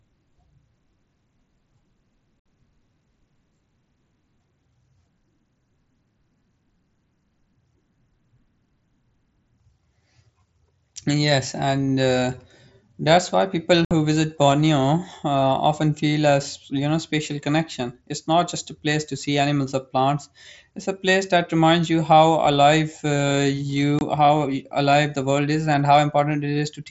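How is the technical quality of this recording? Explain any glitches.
The recording carries wideband Bluetooth headset speech with three brief dropouts. These are unconcealed Bluetooth headset packet loss. The first hole runs from 2.41 to 2.45 s. The second runs from 13.85 to 13.91 s, right after "that's why people". The third is shorter, at 23.99 to 24.01 s. Short voice packets between headset and phone went missing. Nothing filled the gap smoothly. Each hole's length fits a run of several lost packets. The speech cuts out with abrupt edges that can click. The mSBC headset codec carrying the link adds only light grain.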